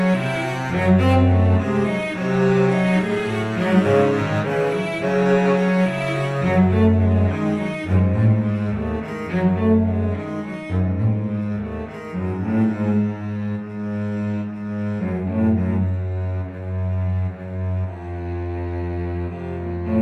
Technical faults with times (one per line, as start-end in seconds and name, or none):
none